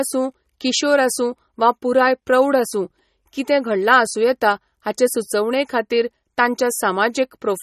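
MP3 compression runs throughout the speech. Nothing remains above 13.1 kHz, and plainly audible watery, swirly smearing, which fits a bitrate around 32 kbps, likely comes from a bit-starved encoder cutting the treble and dropping weak frequency lines frame by frame.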